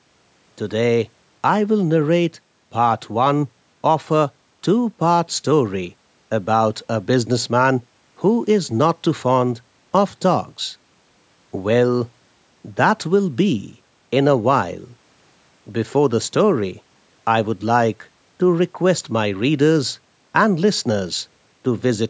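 No technical faults can be heard in this speech recording. It has passed through a call's microphone processing, which takes out the lowest bass and leaves nothing above 8 kHz, as that path normally does.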